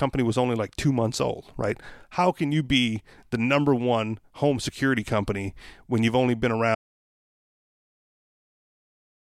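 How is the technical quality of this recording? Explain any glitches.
The recording has one serious glitch: it loses its sound entirely for the last stretch. At 6.75 s, right after "when you've only been", there is an audio dropout to silence that lasts to the end of the clip. The speech stops mid-phrase and even the room tone vanishes, leaving plain silence. That points to the input being cut off, likely through a disconnected device, failed link or accidental mute, while recording continued. On a waveform the trace collapses to a flat line; a spectrogram goes completely blank.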